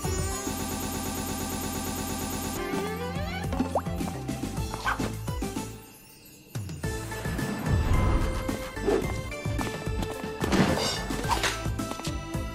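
From 0.60 s to 2.57 s the audio falls into a broken-record loop: a fragment of about 115 ms repeats exactly, back to back, 17 times, at roughly nine repeats per second. The likely cause is a stalled player, encoder or stream that kept resending the last fragment in its buffer. Whatever should have played during those two seconds is lost.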